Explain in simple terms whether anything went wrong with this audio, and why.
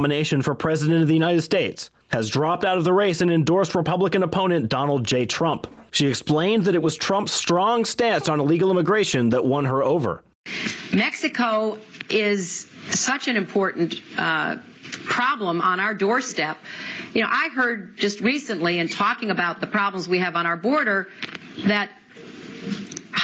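Gain pumping runs through the whole recording, from start to finish. The level breathes. The likely cause is an input gain set far too high, with a fast limiter repeatedly yanking it down by a large amount. The result is squashed audio with loud and soft parts pushed close together. The dull top end, with nothing above 8 kHz, comes from the call's normal processing.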